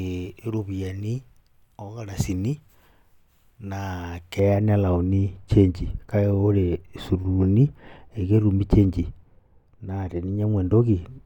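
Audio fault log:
4.39 s to end: de-emphasis applied wrongly. From this point the speech turns dull and muffled, as a treble-cut filter meant to reverse pre-emphasis has been applied where none existed or applied twice, tilting the response smoothly downward so that 10 kHz sits about 11 dB below 1 kHz. On a spectrogram the upper bands fade gradually with rising frequency after 4.39 s, with no sharp cutoff edge, while the waveform shows softened, rounder transients.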